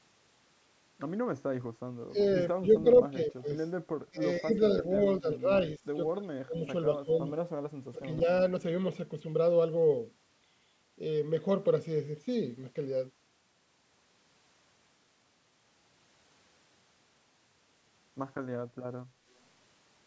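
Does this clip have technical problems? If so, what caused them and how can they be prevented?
Yes. The speech is suppressed in double talk at 2.07–2.17, 2.53–3.47, 4.05–5.79, 6.12–6.63, 7.04–7.12 and 7.91–8.27 s. The level dips by about 20 dB, and by about 30 dB at 6.12–6.63 s. This likely happened because the echo canceller could not tell the near talker from loudspeaker echo while both sides spoke, so it attenuated everything. On a waveform these show as sudden notches in the envelope. On a spectrogram they appear as faded vertical bands, sometimes missing their upper harmonics. A better-tuned echo canceller with proper double-talk detection, or headsets instead of loudspeakers, would prevent this.

An echo leak appears at 2.91–3.02 s as a faint copy of the speech about 20 dB below it, trailing by 175 ms. It is likely residual loudspeaker sound that the far end's echo canceller failed to remove and sent back. 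On a spectrogram it looks like a weak, smeared duplicate of the harmonic pattern shifted 175 ms later. The waveform shows a small secondary burst after the main one. Energy is limited above 8 kHz throughout. Using headphones at the far end, or lowering its loudspeaker volume, would prevent this.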